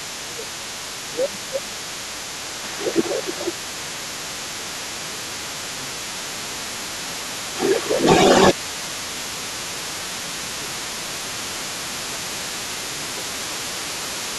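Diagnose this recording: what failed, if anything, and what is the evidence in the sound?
Call processing failed here. The other side's voice is leaking through for the whole recording, sitting roughly 10 dB below the talker. The likely cause is an echo canceller that left part of the loudspeaker playback in the microphone signal.

Speech suppressed in double talk is the second fault, also in call processing. The talker's level dips at 0.18–0.48 s, 1.07–7.25 s, 7.87–8.02 s, 8.53–12.38 s and from 12.69 s to the end. The deepest drops are around 15 dB, and the dip near 8 s is slight. Likely, the canceller turned everything down while both sides spoke.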